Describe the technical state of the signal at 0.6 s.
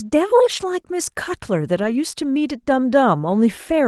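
At 0.6 s the audio sits inside a lost packet rebuilt from error correction, spanning 0.53 to 0.63 s. Roughly 60 ms of it was played from the low-bitrate redundant copies that Opus in-band forward error correction carries in each following packet, which fits three lost 20 ms packets. The stream has no gap or dropout, but those frames sound coarser and noisier than the 32 kbps Opus audio around them.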